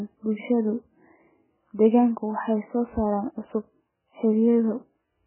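Throughout, likely MP3 compression at a very low bitrate, near 8 kbps, cuts the speech off above 3 kHz and leaves it heavily watery and swirly.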